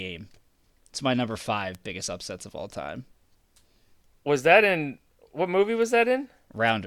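At 1.75 s, between "my number" and "biggest upsets of all", a bit error spike gives one sharp tick, peaking at about -21 dBFS. At 5.82 s, after "that in what movie", a quieter one reaches about -27 dBFS. Each is a flipped bit that jumps a sample or two by a power of two, then snaps back. The clicks are broadband and unrelated to the speech.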